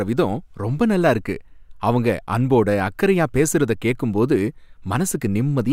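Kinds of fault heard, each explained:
No technical faults can be heard anywhere in the recording; the speech signal stays steady and intact throughout.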